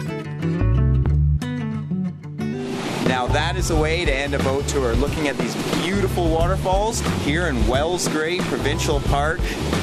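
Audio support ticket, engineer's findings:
No audible faults found.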